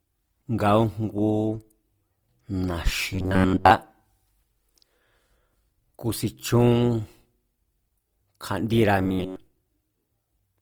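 Throughout the speech, consonants and vowels carry a grainy, rough texture, with noisy fizz where clean tone should be, while the top end still reaches about 20.2 kHz. This is Opus compression, likely in its music (CELT) mode at a low rate near 24 kbps. The encoder keeps each band's energy but, short of bits, fills bands with folded or noise-like content, which roughens the sound instead of dulling it.

From 3.13 to 3.71 s, and again from 8.99 to 9.36 s, the speech turns into a rigid, metallic buzz pitched at 93.8 Hz that only loosely tracks the speech. This is robotic sound from repeated short buffers, likely caused by audio arriving too seldom. The playback loops the last fragment, which fits a buffer of about 10.7 ms, while most of the real audio in those stretches is skipped.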